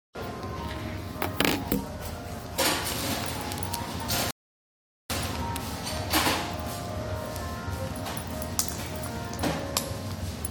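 At 4.31 s the audio just drops into silence and sits there until 5.10 s, then picks up exactly where it left off. That's a rebuffering stall: the player ran dry of downloaded data and had to wait for more to arrive before carrying on. Nothing gets skipped or chopped, so the sound on either side joins up cleanly, but you've got about 0.79 s of dead air wedged into the middle.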